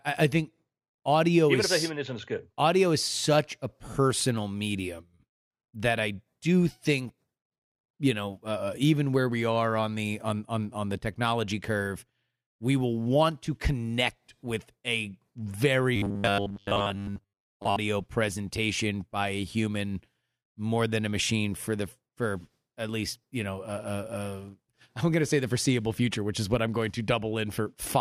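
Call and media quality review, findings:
Robotic sound from repeated short buffers, 15.96–17.76 s, ending before "presentation by a human". Rigid metallic buzz at 100 Hz, fitting a repeated 10 ms block; most real audio skipped. Likely playout underrun. Fixed buzz pitch, unlike codec warble.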